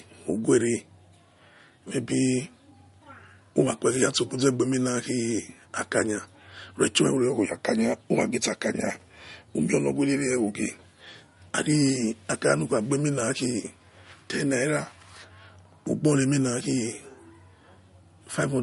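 Throughout, the speech stops dead at 11.2 kHz and sounds watery, likely from MP3 compression near 48 kbps; a spectrogram shows a hard ceiling and flickering gaps.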